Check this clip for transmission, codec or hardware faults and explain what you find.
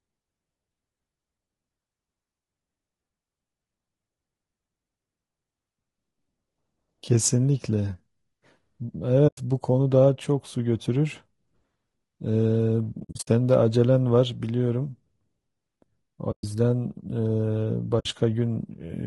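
The speech is damaged throughout by compression and has four short dropouts.

Throughout the clip the voice sounds rough and grainy, with noise filling the gaps between harmonics and a thin, synthetic-sounding top band. The likely cause is low-delay AAC compression (AAC-ELD). Its short frames resolve pitch harmonics poorly, and the result fits a bitrate around 32 kbps.

At 9.27 s (about 100 ms), 16.31 s (about 120 ms) and 17.99 s (about 60 ms), the sound fades briefly to silence and back. A cluster of gaps is scattered over about 0.28 s from 12.99 s, the longest around 70 ms. This is AAC frame loss with muting: the decoder zeroed the missing frames, and the overlapping windows softened the edges of each hole.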